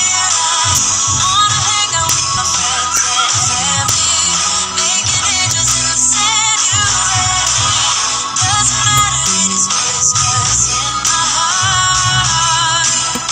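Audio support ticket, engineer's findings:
Integer overflow at 0.75–0.78 s, 2.09 s, 2.97 s, 3.89 s, 5.51–5.71 s, 7.48 s, 8.98–9.27 s and 11.07 s. Violent cracks on loud peaks, harsher than clipping. Probable gain or mixing stage with unsaturated integer arithmetic. Peaks pushed up to about 3 dB past full scale wrap to the opposite sign instead of limiting, flipping across the full range.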